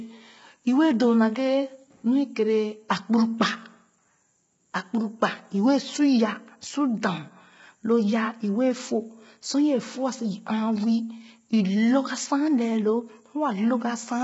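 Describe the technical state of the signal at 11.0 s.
At 11.0 s the speech sounds rough and grainy, with a hiss filling the gaps between the harmonics and nothing at all above about 7.7 kHz, the same as across the whole clip. The likely cause is low-delay AAC compression of the AAC-ELD kind, at a heavy setting that fits a bitrate around 16 kbps. Its very short frames cannot separate closely spaced pitch harmonics well, so too few bits leave noise between them and the top band removed.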